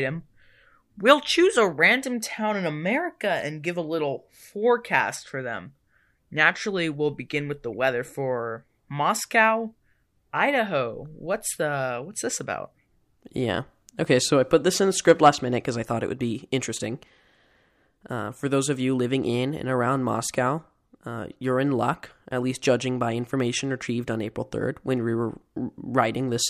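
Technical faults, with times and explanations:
Nothing technical stands out in this speech recording, so there's nothing to list here.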